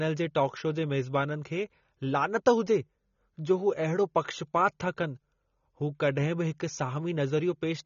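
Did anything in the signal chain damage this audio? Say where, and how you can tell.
Yes, at the codec stage, throughout the speech. Nothing reaches above 6.9 kHz, and sibilants fizz and warble. The likely cause is AAC compression: AAC-LC at a bitrate fitting 24 kbps discards and smears detail. A plain low-pass filter would dull the sound without that warble.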